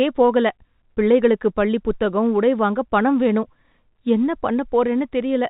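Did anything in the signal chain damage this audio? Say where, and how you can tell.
No, nothing in this speech stood out as damage on listening, beyond the narrow band you would expect from ordinary telephone coding.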